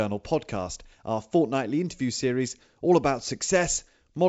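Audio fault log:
No faults can be heard in the speech. The G.722 wideband telephone coding works as intended: the band stops near 7.7 kHz, the light coding trace fits the 64 kbit/s mode, and it leaves at most faint damage.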